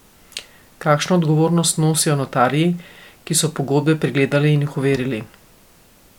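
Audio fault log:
No faults heard.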